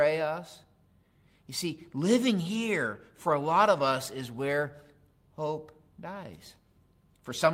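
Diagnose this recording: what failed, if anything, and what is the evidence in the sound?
Nothing failed here: listening through the speech, there's no break, glitch or distortion to point to at any stage, so there's nothing to diagnose.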